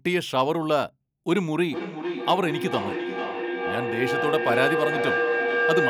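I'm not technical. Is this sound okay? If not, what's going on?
No. From about 1.31 seconds until the end, a feedback howl takes over: a steady mid-pitched tone, around 500 Hz, swells up almost as loud as the speech and throbs a little more than twice a second. Two devices in the same room are on one call, so sound from a loudspeaker goes back into a microphone and comes out louder each time, until it becomes this ringing tone. Muting one device breaks the loop.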